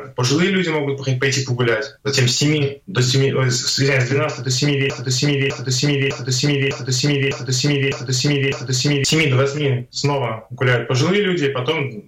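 From 4.9 to 9.0 s, a broken-record loop: a 0.6 s fragment repeats seven times, back to back. The playback likely stalled. The intended audio is lost.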